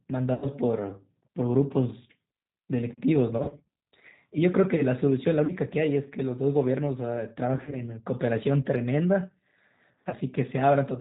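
Speech, coded throughout with G.729 at 8 kbit/s. Nothing above 4 kHz survives, and the voice sounds rough and synthetic. VoIP packet loss concealed by the speech codec occurs at 0.34–0.47, 3.38–3.65, 5.45–5.53, 7.57–7.79 and 10.09–10.14 s. There, missing audio up to 140 ms is extrapolated into a fading buzzy tone or coloured noise.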